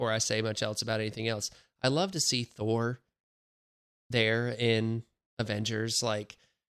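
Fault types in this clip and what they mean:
No technical faults can be heard anywhere in this speech recording. Nothing in the audio marks a point where the signal chain breaks down.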